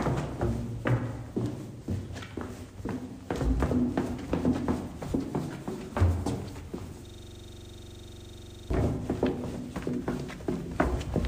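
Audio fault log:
7.06–8.70 s, system hang loop: a 23.4 Hz buzz, one 42.67 ms slice repeating while the frozen system's hardware cycles a buffer, which fits 2048 samples.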